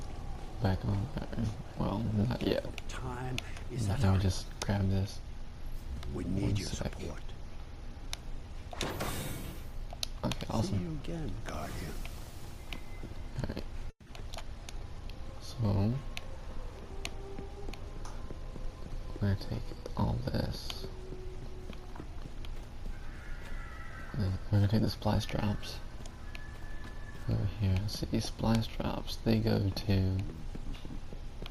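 At 13.90 s the sound gives way to a decaying buzz-like continuation lasting about 160 ms, followed by roughly 60 ms of silence, and resumes at 14.07 s with 160 ms absent. This is likely a long network dropout, where the receiver concealed missing packets before giving up.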